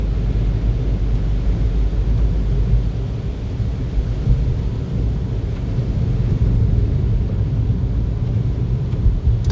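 No technical faults can be heard in this recording, so there is nothing to describe in time order.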